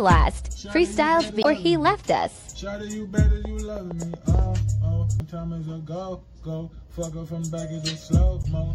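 Throughout, the audio has a watery, swirly quality with smeared attacks, plainly audible MP3 compression, likely at a low bitrate of about 64 kbps.

From 1.40 to 1.46 s, damaged data in a compressed stream causes a brief glitch: the decoder misreads corrupted frames and loses sync.

From 3.45 to 4.40 s, a train of clicks adds roughly seven similar pops at an irregular rate of about 6.4 per second, peaking a few dB above the sound, likely from electrical interference or a faulty connection.

The same compressed-stream damage recurs briefly from 5.17 to 5.22 s and from 8.41 to 8.46 s.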